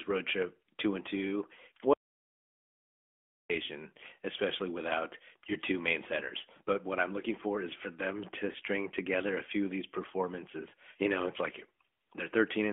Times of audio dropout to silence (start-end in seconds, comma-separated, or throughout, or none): 1.93-3.50